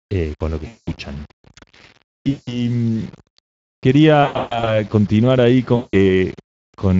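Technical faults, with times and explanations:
Throughout: low bit depth without dither, likely from rounding to about 7 bits; grainy distortion tracks the signal, with error only about 30 dB down, unlike steady hiss.
Throughout: Speex codec at about 20.6 kbps; plainly audible hoarse, noisy coding roughness, with the upper band sounding like shaped noise rather than real detail.
0.67–0.93 s, 2.29–2.65 s, 4.23–4.79 s, 5.75–5.97 s: VoIP packet loss concealed by the speech codec; the decoder stretches the last sound into a fading buzzy tone or coloured noise, and the lingering weakness afterwards distinguishes it from a clean dropout. The 4.23 s event comes in scattered bursts.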